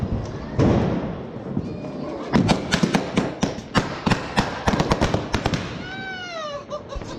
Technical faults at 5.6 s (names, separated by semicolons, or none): none